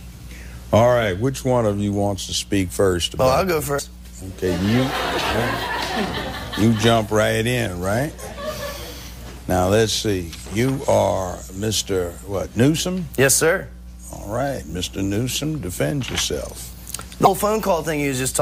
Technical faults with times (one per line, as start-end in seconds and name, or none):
3.75-3.79 damaged data in a compressed stream
17.23-17.27 damaged data in a compressed stream